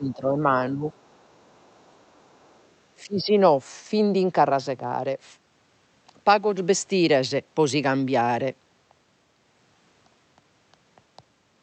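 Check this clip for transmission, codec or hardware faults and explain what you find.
Two echo-related faults appear in the first few seconds of this speech. The call codec sounds consistent with Opus at 8 kHz bandwidth and is working normally.

Speech suppressed in double talk occurs from 0.0 to 0.57 s, 0.73 to 0.84 s and 3.04 to 3.32 s. The talker's level sinks by about 10 dB in the first two, and about 15 dB in the last. The likely cause is the echo canceller mistaking overlapping talk for echo and turning everything down.

The other side's voice leaks through from 0.92 to 2.69 s. A second voice sits very faintly under the speech, far below it in level. The echo canceller likely failed to remove all of the loudspeaker sound reaching the microphone.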